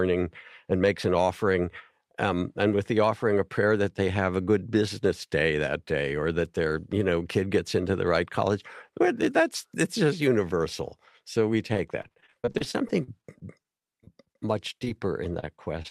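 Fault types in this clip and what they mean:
Repeated packet loss (robotic sound): right after "just universal so we" and again in the last half second, chunks keep dropping and getting patched, so the audio turns choppy with pieces missing.
Short concealed packet loss: two quick holes of about 20 ms near 14.8 s, each filled by stretching the preceding sound, leaving a brief smear or wobble.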